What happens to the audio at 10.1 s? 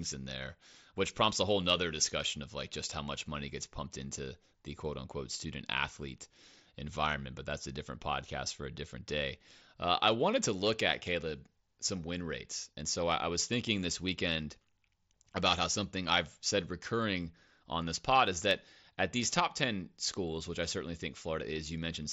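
Nothing goes wrong at 10.1 s; the speech carries straight through that moment with no dropout, click or other fault.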